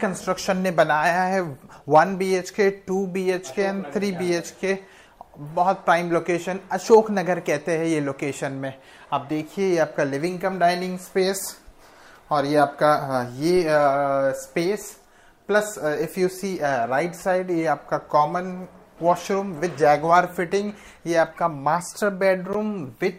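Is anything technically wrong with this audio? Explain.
Yes. At 13.57 s a DC step shifts the waveform's zero line by about -27 dBFS, then drains away through a 5 Hz high-pass, giving a single low thump rather than a dropout's gap.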